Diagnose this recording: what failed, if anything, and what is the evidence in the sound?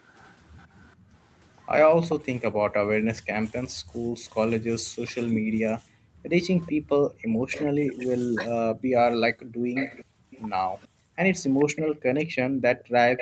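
A faint delayed copy of the speech trails by 434 ms from 0.0 to 3.22 s, then grows much louder from 6.66 s on: likely echo leak through the call's echo canceller.

The room sound dips by up to about 40 dB for about half a second within 0.96 to 4.14 s, and again from 5.83 s: background gated by the echo canceller.

Between 7.49 and 10.43 s the speech drops by roughly 35 dB in short pieces, likely speech suppressed in double talk as the echo canceller ducked both sides.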